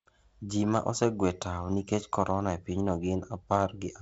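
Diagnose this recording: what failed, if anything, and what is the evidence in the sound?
Nothing failed: the speech is band-limited at 7.7 kHz with the light upper-band hiss and slightly grainy lower band expected of G.722 wideband telephone coding, most likely at its 48 kbit/s rate.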